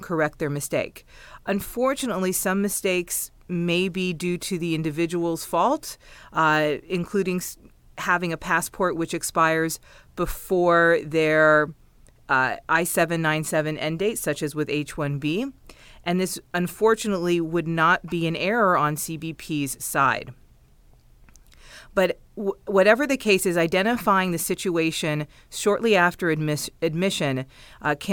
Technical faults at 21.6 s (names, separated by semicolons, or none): none